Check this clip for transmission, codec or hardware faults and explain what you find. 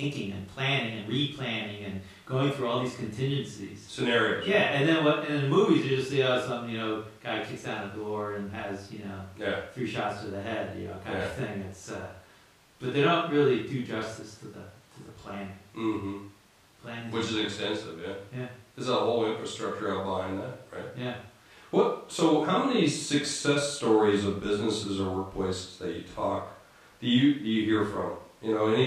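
No faults detected in this clip.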